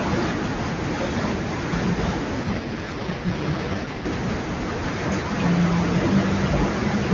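Speech coded with AMR wideband (HD Voice), clear at first, has an AMR rate drop from 2.43 to 4.06 s. The voice turns rough and synthetic, which fits the codec rate falling from 23.85 to 6.6 kbit/s on a weak link. On a spectrogram the band stays full to 7 kHz with no gap in the waveform, but harmonics blur into noisy texture until the rate recovers.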